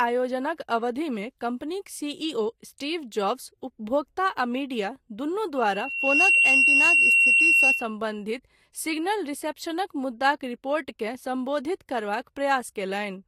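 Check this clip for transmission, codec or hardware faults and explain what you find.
There is one fault: loudspeaker feedback squeal. From 5.56 to 7.96 s, a tone at 2.7 kHz swells over less than a second. It ends up about 10 dB above the speech. The microphone is hearing its own loudspeaker. At that frequency the loop gain exceeds one, so the tone keeps feeding itself.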